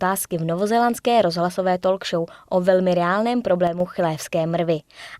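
At 3.67 s, just after "show o velmi reálném", the speech level falls abruptly by about 6 dB and holds there until 3.80 s, a gap of roughly 0.13 s, before snapping back. This is most likely one channel drops out: one side of the stereo pair goes silent briefly, so the mono sum keeps only half of the content shared by both channels, and anything carried solely in the lost channel vanishes for that moment.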